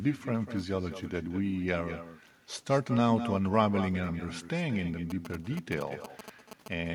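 From start to end, every phrase is trailed by a thinner copy about 12 dB down, arriving roughly a fifth of a second late. That is echo with no canceller: the far end's loudspeaker feeds its microphone, and nothing strips the returning voice before it travels back.

From 5.10 to 6.68 s, a galloping dit-dit-dit of short 217 Hz buzzes cuts in, about 10 dB below the speech. These are GSM signalling bursts, radio pulses from a nearby 2G phone that the audio circuitry rectifies into audible interference.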